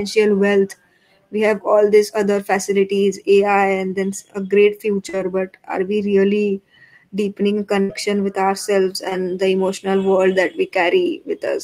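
Around 40 ms of audio arrived too late for the decoder between 5.09 and 5.15 s, after "a great" and before "but are we really". This is short concealed packet loss. The receiver extended the preceding sound and blended it back into the real audio, leaving a brief smear.

A burst of packet loss follows from 7.81 to 7.91 s, between "are we really deepening" and "with ourselves". About 80 ms went missing in a row. The concealment stretched the last sound and faded it down as the gap continued, so a held, dying tail is audible before the speech resumes with that stretch gone.

A second short concealed packet loss, about 20 ms, falls at 9.09 to 9.13 s, after "with ourselves" and before "the emotional world that". It is patched the same way and heard as a quick smudge.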